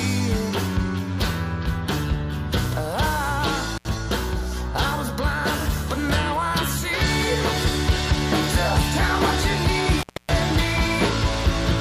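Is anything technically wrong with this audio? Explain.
Yes. An intermittent contact cuts the audio at 3.77 to 3.86 s (open about 73 ms) and at 9.99 to 10.30 s (about 259 ms). A loose connection briefly breaks, so the sound drops out with crackle at each edge and faint hiss inside. On a waveform each gap looks nearly flat, and on a spectrogram it appears as an almost empty band between broadband vertical click lines.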